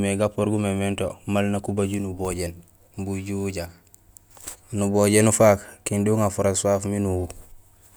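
No technical faults can be heard in this speech recording.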